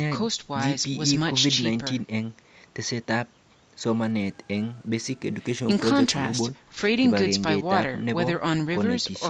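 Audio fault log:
4.01–6.41 s, Bluetooth SBC bit pool drop: the treble dulls and a gritty grain rises under the speech, which fits a bit pool cut from 28 to 12, near 96 kbps. Unlike packet-loss dropouts, the sound never breaks off, and clarity returns once the rate recovers.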